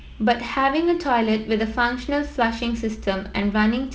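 No technical faults can be heard in this speech clip. It carries the bandwidth of wideband telephone coding, with speech reaching up to about 7 kHz, a faint hiss in the upper band and a slight graininess in the lower band, which fits G.722 running at 48 kbit/s.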